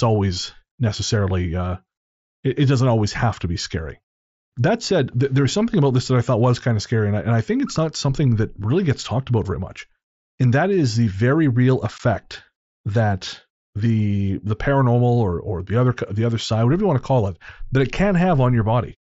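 At 11.98 s, just after "is the very real", the speech drops out for about 15 ms. This is unconcealed Bluetooth headset packet loss. Voice packets travelling from headset to phone went missing, and nothing was built to cover them. Silence or an idle pattern fills the space instead. The gap length fits two lost headset frames. The hole has hard edges. The mSBC wideband link carries the speech on either side.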